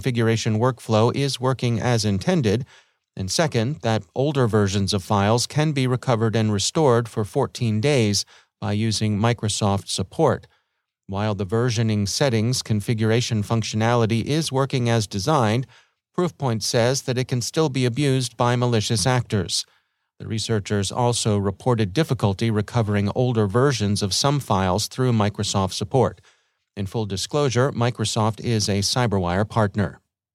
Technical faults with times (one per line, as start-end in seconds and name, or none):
none